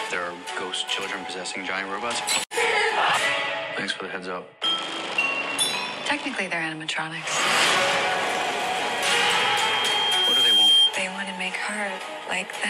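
Loudspeaker feedback squeal, 8.38 to 10.95 s: a 3.2 kHz tone circulates between microphone and speaker, swelling over about two seconds to roughly 10 dB above the sound.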